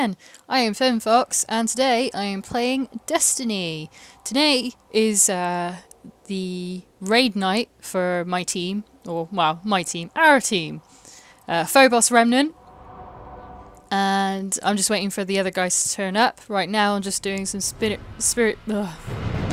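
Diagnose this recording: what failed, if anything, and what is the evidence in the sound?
Nothing stood out on listening, and no stage of the chain, from the wiring to playback, left any audible trace of a failure.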